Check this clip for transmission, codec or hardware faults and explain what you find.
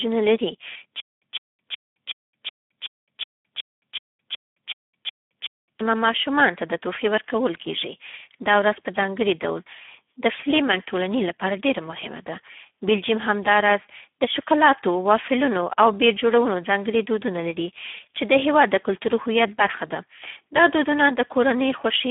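One codec fault runs through the whole clip. Speex codec damage is heavy: the speech sounds hoarse and noisy, confined to roughly 150 Hz to 3.4 kHz with nothing above 3.7 kHz, which fits a low-bitrate narrowband setting near 8 kbps.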